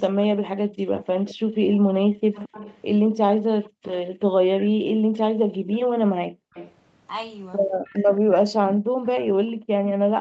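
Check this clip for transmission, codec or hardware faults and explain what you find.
Two kinds of trouble show up here, both tied to a speakerphone on the far side of the call: an echo of the speech coming back, and the room background being clamped down.

Echo leak shows up from 0.97 to 3.97 s, briefly at 6.54 to 6.73 s, and again from 7.75 to 9.93 s. You hear a second copy of the speech trailing the original by about 0.22 s, sitting roughly 15 dB down, and nearer 20 dB down in that short middle burst. The likely cause is an echo canceller that didn't fully strip out the loudspeaker sound its own microphone caught, so the leftover got sent straight back.

Background gated by the echo canceller happens three times. Between 3.18 and 3.84 s the room sound drops out in short bits adding up to around 150 ms. From 5.58 to 6.53 s it's gone for about half a second in total. From 8.21 s it stays suppressed to the end. 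At its deepest the drop is about 40 dB. That's the canceller yanking the mic level down while the loudspeaker plays, so the ambience just vanishes and only comes back once it releases. Through all of this the audio tops out at 8 kHz, which is simply the call path's bandwidth.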